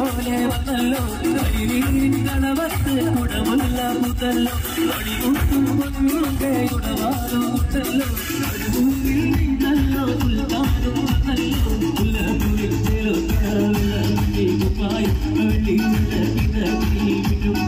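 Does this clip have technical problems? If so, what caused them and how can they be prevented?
No, nothing here stands out as a technical problem, so there's nothing that needs preventing.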